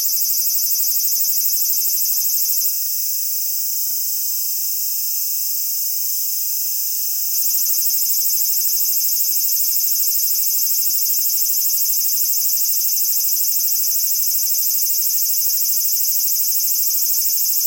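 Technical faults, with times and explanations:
2.70 to 7.34 s, channel delay (doubling): the sound turns thick and doubled, each onset followed by a slap-like repeat at equal level. One channel arrives 40 ms late, and when both are summed to mono the late copy stands apart as a separate echo.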